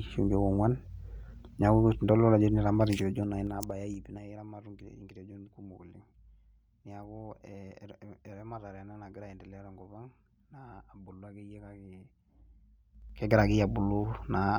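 From 2.88 to 4.37 s the speech gets pulled down by about 20 dB, but in hard 3 dB jumps, roughly four a second, so you hear distinct ticks as it drops. That's zipper noise: the gain is updated in coarse steps with no smoothing, and each jump clicks. It happens again from 12.91 to 13.38 s, this time coming back up about 20 dB, with the steps so fast, around fifteen a second, that the ticks blur into a short zip.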